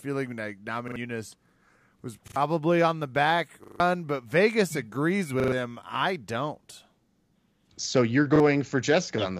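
Short stutters, each a 40 ms slice played again with a hard join, interrupt the speech at 0.88–0.96 s, 2.28–2.36 s before "on the back", 3.64–3.8 s, 5.4–5.52 s before "him I don't", 7.12–7.16 s after "him I don't", and 8.36–8.4 s. This is a repeated buffer: fresh audio arrived late, so the device replayed the last buffer, which fits a 40 ms buffer. The repeats hide up to about a sixth of a second of speech.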